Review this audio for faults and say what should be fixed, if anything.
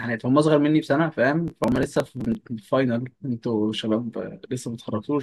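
From 1.48 to 2.35 s, gritty crackle tears through the speech. This is processor overload crackle: dozens of short buffers, around 3 ms each, missed their deadlines and were skipped, leaving hard-edged gaps. Larger buffers or a lighter processing load would prevent it.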